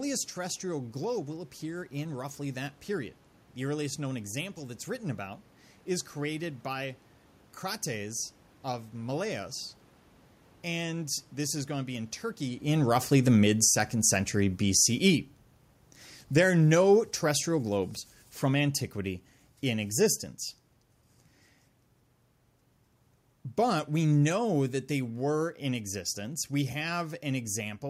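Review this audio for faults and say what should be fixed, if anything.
Automatic gain falling shows up twice. From 9.11 to 20.35 s the level sinks by about 11 dB, then from 23.6 to 26.93 s by about 4 dB more. The AGC judged the input too hot or its background noise too strong and pulled its gain down, so the room noise sinks right along with the speech. The level change around 12.5 s is just the talker shifting. To prevent it, set the input gain lower up front or switch the AGC off.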